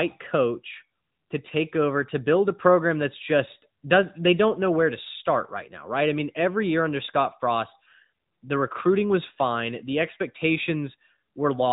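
From start to finish the speech sounds boxed-in and buzzy, with a synthetic edge to the voiced sounds and nothing at all above about 3.8 kHz, so sibilants lose their hiss. This is the AMR narrowband mobile codec (AMR-NB) at work. It rebuilds the voice from a vocal-tract model excited by sparse pulses in 20 ms frames at an 8 kHz sample rate. The plainly audible damage points to an upper mode of roughly 10 kbps.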